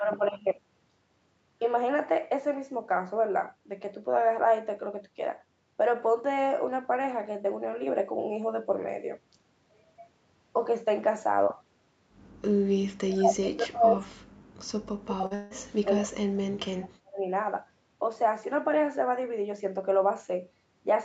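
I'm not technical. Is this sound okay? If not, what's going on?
No. There are three problems, all in the second half.

The first is speech suppressed in double talk. From 13.05 to 14.2 s, and again from 14.97 to 17.27 s, the speech keeps getting turned down very far. It sometimes almost disappears, for about a second in the first stretch and about two seconds in the second. This is likely the call's echo canceller. It probably heard the other side talking at the same time and mistook this speech for echo.

The second is short concealed packet loss. At 15.21 to 15.24 s and 15.26 to 15.33 s, small pieces of the audio never arrived, about 20 and 40 thousandths of a second. The phone patched each hole by stretching the sound just before it. You may hear a tiny smear or wobble rather than a gap.

The third is a long network dropout, from 15.35 to 15.52 s. Roughly a sixth of a second of audio went missing, likely because the connection stalled. 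The phone filled the whole gap with a continuation of the last sound, so there is no silence. Instead it sounds blurred or buzzy, and what was really said there is lost. The speech then picks up again afterwards.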